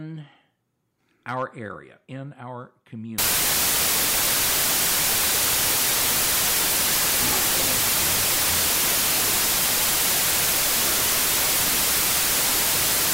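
From 3.18 s to the end the audio suffers a wrong sample width problem. Samples written as 32-bit integers are being read as 16-bit ones, so every real sample splits into two values. One carries the top bits and follows the signal, and the other is low-order junk that comes out as noise. That's why you get a loud hiss with the original buried underneath, playing at half speed and an octave down.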